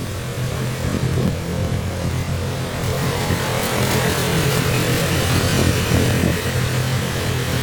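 From the start to the end, the sound shows planar audio read as interleaved. Each block stores all its left samples and then all its right ones. The player takes them as alternating pairs instead. So every block plays twice at double speed, left half then right half. The pace still holds, but the pitch rises an octave. A flutter runs at about 21.5 Hz. That matches blocks of 46.44 ms, which fits a 2048-sample block.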